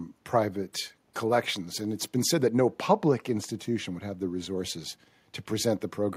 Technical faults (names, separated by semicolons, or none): none